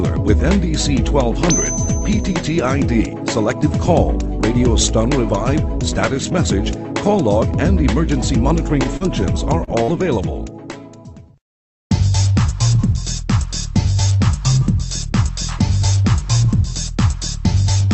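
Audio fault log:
8.97–9.03 s, short concealed packet loss: about 40 ms of audio never reached the decoder in time. The receiver extended the preceding sound across the hole, leaving a brief smear or wobble.
9.64–9.70 s, short stall from a late packet: a packet arrived about 29 ms late and the jitter buffer ran dry. The last sound is held slightly too long, but nothing is lost.
9.83–9.91 s, burst of packet loss: about 40 ms of audio in a row was lost. The receiver continued the last sound while fading it, then resumed further on with that stretch skipped.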